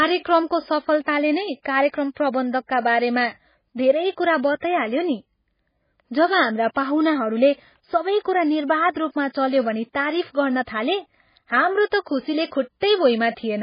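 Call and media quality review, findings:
MP3 compression, heavy, throughout the speech. Watery, swirly texture. Sibilants smeared and chirpy. No content above 5 kHz, so a hard treble ceiling. Likely cause: a starved MP3 encode, which fits a very low bitrate near 16 kbps.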